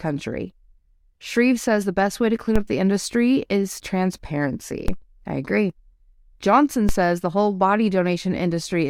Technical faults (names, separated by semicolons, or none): DC step